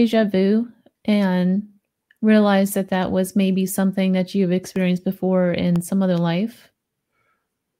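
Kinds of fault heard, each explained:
Periodic USB or driver dropouts: Something stalls the audio path once a second, blanking roughly half a millisecond with silence each time, heard as about four evenly spaced ticks.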